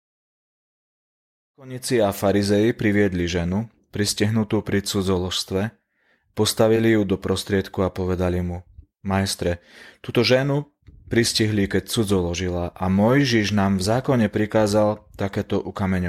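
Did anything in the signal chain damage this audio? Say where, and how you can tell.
Yes. Repeated frames at the codec or storage stage: at 6.76 to 6.79 s a 20 ms block of speech plays twice, adding 20 ms, a brief stutter rather than a gap or dropout.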